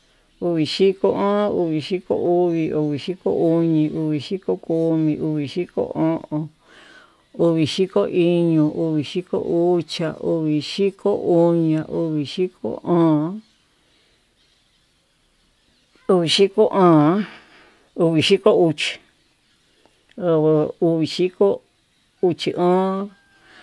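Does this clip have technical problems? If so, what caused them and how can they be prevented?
No, there are no technical problems to point to in this speech recording. Since nothing went wrong, there is no cause to trace and nothing that needs preventing.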